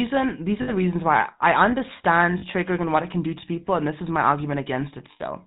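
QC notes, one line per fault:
throughout: GSM full-rate codec. The speech has a buzzy, gravelly roughness from start to end, and the damage is plainly audible. The codec models the vocal tract and drives it with a coarse, regularly spaced pulse excitation. That leaves a grainy texture on every voiced sound. Nothing above 4 kHz survives, so the sound is dull and boxy. The character fits a 13 kbps full-rate stream.
0.62 to 0.72 s, 2.38 to 2.43 s, 5.12 to 5.21 s: lost GSM frames. Three short dropouts interrupt the speech. The first falls after "these are" and before "reasons why I understand". The second comes after "reasons why I understand" and before "and what it can". The third is near the end. They last about 60, 40 and 80 ms. In each gap the decoder repeats the last good frame, so the speech smears into a rough, metallic ring instead of going silent.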